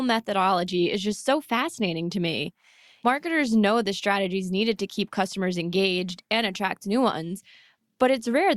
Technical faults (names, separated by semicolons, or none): none